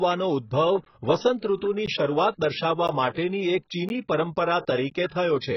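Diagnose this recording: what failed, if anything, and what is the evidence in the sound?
The speech sounds dull and smeared throughout, with nothing above 6 kHz and a warbling, fizzy texture on sustained sounds and sibilants. The cause is likely AAC compression at the codec stage. AAC-LC quantises each frame's frequency lines against a hearing model, and when bits are scarce it drops the top of the spectrum and leaves holes or substitute noise in the bands below. Damage this heavy fits a very low bitrate, around 12 kbps.

Short dropouts of about 13 ms occur at 0.85, 1.86, 2.88, 3.89 and 4.90 s, almost exactly one second apart. This is a gap between chunks, arising at storage or playback. The audio was handled in one-second pieces, and silence was inserted at each join. No sound is lost, but the flow is cut at every boundary.

From 1.56 to 1.62 s, a short hiss leads into a sharp attack, and the onset itself sounds softened. 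This is pre-echo, a codec artefact tied to the compression. The transform spreads quantisation noise across its whole block, so noise sized for the loud attack also fills the quiet moment before it, here smearing over about 55 ms.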